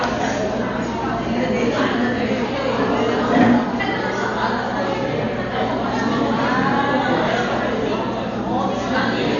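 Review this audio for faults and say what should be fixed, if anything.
Throughout the whole clip the sound is dull and heavily damaged: nothing is present above 7 kHz, and tonal parts are surrounded by a rough, fluttering noise. This is likely Dolby Digital compression at a very low bitrate, which fits something around 48 kbps. Starved of bits, the encoder cut the upper band and left many frequency lines with no real detail, so the decoder filled them with noise. Encoding from the original source at a much higher bitrate, or keeping an uncompressed master, would prevent this.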